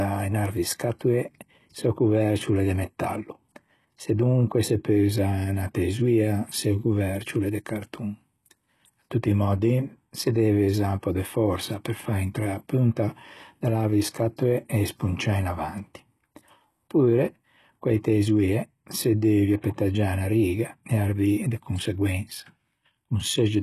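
Speech throughout has a gritty, lispy, metallic treble on s sounds, likely from HE-AAC compression at a very low bitrate, consistent with about 16 kbps.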